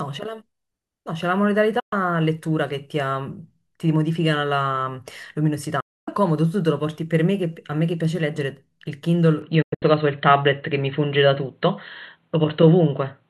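At 1.79 s and again at 5.80 s a digital broadcast dropout occurs: the receiver stopped getting valid frames and muted. Each time the speech fades out in about 8 ms to silence, for about 120 ms and then 264 ms, and that material is simply gone.

From 9.42 s the input was likely switched to a poorer device. Everything above 4.2 kHz vanishes, leaving the speech duller and a few decibels different in level, with a faint new noise floor and no gap at the change.

Just after, between 9.62 and 9.83 s, another dropout breaks the sound into short holes, the longest about 96 ms.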